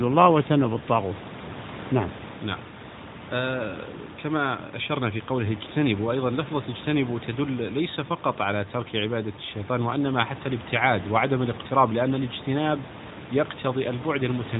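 No technical faults are audible in this clip.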